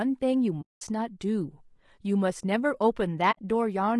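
Throughout the speech there is a rough, grainy texture, with noise filling the gaps between harmonics and a thin, synthetic top band. This is likely low-delay AAC compression (AAC-ELD) at a low bitrate, around 32 kbps. Its short frames resolve pitch poorly. From 0.61 to 0.82 s, and again from 3.31 to 3.39 s, the sound fades to silence and back. This is AAC frame loss with muting. The decoder zeroed the missing spectra, leaving soft-edged holes of 200 ms and 60 ms.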